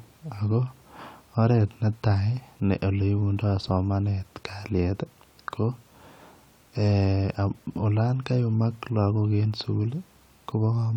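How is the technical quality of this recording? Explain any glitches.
No audible glitches or faults.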